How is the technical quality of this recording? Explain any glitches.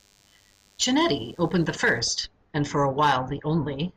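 The recording has one clear fault, a DECT cordless phone buzz. It runs from the start of the speech clip to about 2.0 s, then stops. A DECT handset or base station close by sends a short radio burst every 10 ms. The audio circuit picks up that radio energy and rectifies it into sound. The result is a thin, steady buzz at 100 Hz, rich in harmonics. It sits well under the speech, roughly 35 dB down.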